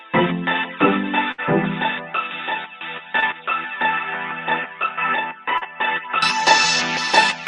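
From the start until 6.22 s, the sound is dull and boxy. Nothing passes above 3.8 kHz. The level sits about 10 dB lower, over a faint new noise floor. At 6.22 s it clears up with no silence. An input switched to a poorer device is the likely cause.

At 1.31 s comes a burst of packet loss, lasting to 1.40 s. About 60 ms of audio never arrived. The receiver stretched the last sound across the hole for about 67 ms, fading it out. A held, dimming tail is heard, then the sound resumes with that part missing.

Short concealed packet loss follows twice, at 3.20 s and at 5.58 s. The first gap is about 20 ms, filled by an 18 ms continuation. The second is about 40 ms, filled over 34 ms. Each is a brief smear or wobble where the real audio dropped out.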